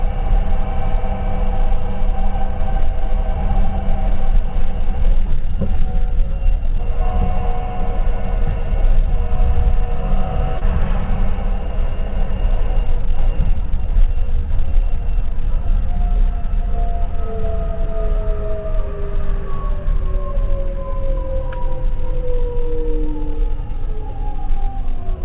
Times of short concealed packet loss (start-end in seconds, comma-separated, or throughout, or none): 10.58-10.63